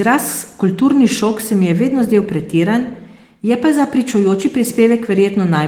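No technical faults are present: the speech has been through Opus voice compression in its hybrid, full-band mode, with content reaching up to about 20.2 kHz and only light coding texture, which fits a rate of around 20 kbps.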